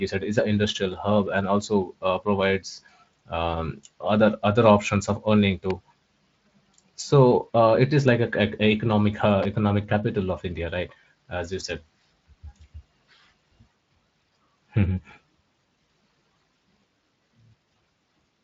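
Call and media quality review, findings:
Electrical switching spike at 5.70 s and 9.43 to 9.45 s: sharp snaps sitting on top of the speech, the second much longer. Likely a nearby switch or relay arcing into the line. The Speex-coded band stops near 7.6 kHz, with only light coding roughness.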